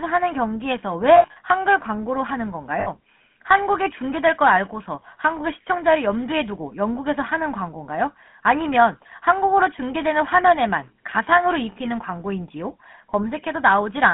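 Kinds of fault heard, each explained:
GSM full-rate codec: The speech is rebuilt from a vocal-tract model driven by regular pulse excitation, giving a plainly audible buzzy, gravelly roughness throughout. The band is confined to roughly 200 Hz to 3.4 kHz, consistent with a 13 kbit/s GSM full-rate link.
Lost GSM frames: Missing frames are concealed by repeating the last good frame at decreasing level, which produces a rough, metallic ring. Scattered losses occur from 1.16 to 1.37 s, with the longest run around 70 ms, and a 60 ms gap occurs from 2.80 to 2.89 s.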